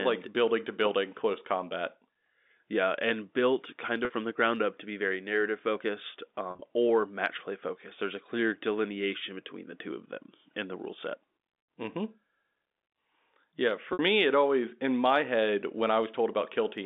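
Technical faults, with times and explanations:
4.05–4.10 s, 6.51–6.61 s, 13.93–13.99 s: packet loss with pitch repetition. The decoder repeats the last pitch period across 50–80 ms gaps, giving brief held, buzzy sounds.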